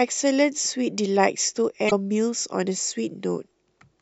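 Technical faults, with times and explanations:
1.87 to 1.93 s, damaged data in a compressed stream: a short glitch cuts into the speech for about 56 ms. Some of the coded bytes at this point are wrong. The decoder cannot read those frames correctly. It loses its place in the stream and hunts for the next valid frame header. While it does, it outputs a burst of nonsense or drops the frames. The result is this brief glitch in the speech.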